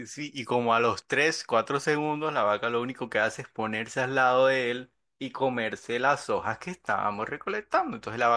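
Listening to this speech recording, nothing stood out as a technical problem at any point.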